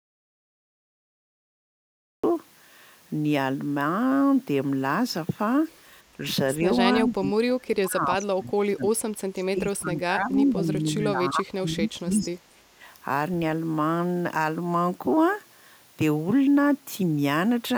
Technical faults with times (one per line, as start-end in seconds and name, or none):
0.00-2.23 audio dropout to silence
6.17-6.23 speech suppressed in double talk
7.01-8.93 speech suppressed in double talk
9.32-12.41 speech suppressed in double talk
12.74-12.82 speech suppressed in double talk